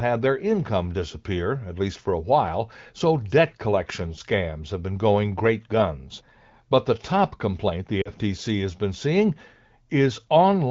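Lost AMR speech frames at 8.02 to 8.10 s, between "the top complaint the" and "has been seeing": about 40 ms of AMR-WB wideband audio, which fits two 20 ms frames, failed their checks. The decoder filled the gap by reusing the last good pitch and vocal tract settings at falling gain, so the sound briefly drops toward near silence.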